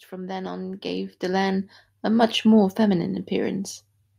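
From 0.08 to 2.42 s, automatic gain rising lifts speech and background together by about 9 dB. Because the noise floor climbs too, it isn't a talker moving closer.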